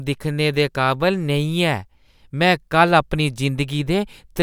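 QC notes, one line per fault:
No technical faults heard anywhere in the recording.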